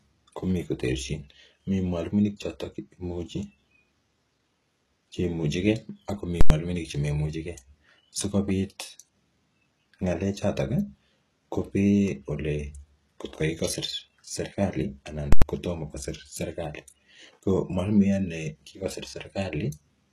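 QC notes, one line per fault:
throughout: HE-AAC compression, likely, at a rate that fits a 16 kbps stream. Nothing remains above 14.1 kHz, and the damage is plainly audible. The treble is rebuilt from copied lower bands whose harmonics don't align, so s sounds come out gritty and lispy.
6.41–6.50 s and 15.33–15.42 s: invalid numbers at full scale. Each block of about 93 ms, which fits a 4096-sample processing block, is pinned flat at one extreme value far beyond the speech peaks. Each produces a very loud pop at onset and release with no sound between.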